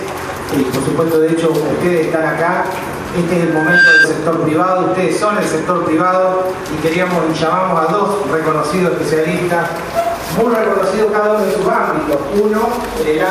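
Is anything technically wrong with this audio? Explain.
Yes. From 3.41 to 4.07 s there is loudspeaker feedback squeal: a microphone re-amplifies its own loudspeaker, and the loop gain at 1.6 kHz exceeds one, so that tone grows by itself. The tone swells for under half a second to roughly 10 dB above the audio. That build-up tells it apart from a steady interference whistle.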